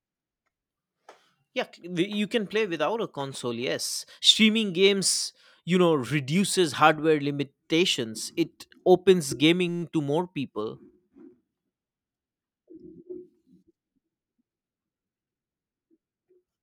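Speech with a system hang loop from 9.69 to 9.83 s: a 5.8 ms buffer, which fits a 256-sample buffer, repeats 24 times and produces a steady 172 Hz buzz. The waveform shows identical repeating cycles, and the spectrogram shows a harmonic comb at 172 Hz multiples. Essentially no audio is lost.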